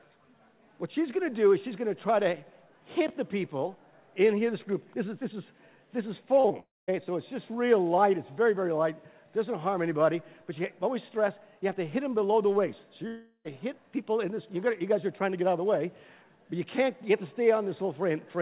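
Packets failed to reach the decoder in time at 6.40 to 6.46 s and again at 6.48 to 6.52 s. This is short concealed packet loss: the receiver extended the preceding sound for about 40 ms and then about 17 ms, heard as a quick smear.

A long network dropout likely follows: from 6.60 to 6.90 s no audio arrives, so the continued sound fades into roughly two tenths of a second of silence. At 13.08 to 13.47 s the same happens with a longer fill and a brief silence. Both times the audio resumes further on, with the missing part gone, all within a band that stops at 4 kHz, as a G.711 call path gives.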